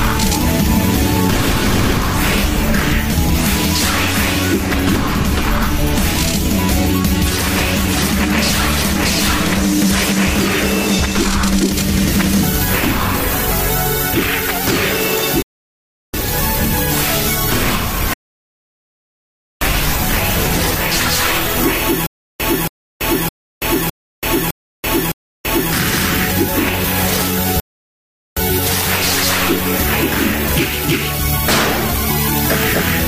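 At 15.42 s the audio drops to silence until 16.14 s and then continues exactly where it stopped. This rebuffering stall adds about 0.72 s: playback ran out of downloaded data and waited. A second stall, from 18.14 s to 19.61 s, adds 1.48 s the same way. From 22.07 s to 25.73 s comes a stutter with silent gaps. A 277 ms fragment repeats six times, each followed by 333 ms of digital silence, for a steady 610 ms cycle. The audio that should have filled that span is missing, most likely because the stream stalled and replayed its last buffered fragment at each retry. A final rebuffering stall at 27.60 s to 28.37 s inserts another 0.77 s of silence before playback resumes seamlessly.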